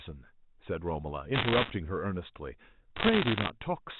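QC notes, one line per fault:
1.34 to 1.70 s: bit errors on a digital phone line. Sharp ticks crackle over the speech. Flipped bits corrupt single mu-law samples, and hits on sign or high bits jump the waveform. The density suggests roughly 2 percent of bits damaged.
2.96 to 3.50 s: bit errors on a digital phone line again. The crackle is slightly sparser, pointing to a rate nearer 1.5 percent. Each tick is one wrong sample. The G.711 band limit below 4 kHz stays intact underneath.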